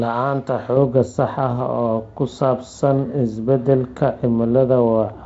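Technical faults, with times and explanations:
0.77 s to the end at 5.25 s: de-emphasis applied wrongly. A treble cut meant to undo pre-emphasis hits speech that had none, or is applied twice, so the response slopes smoothly downward, about 11 dB lower at 10 kHz than at 1 kHz, and the sound turns dull and muffled.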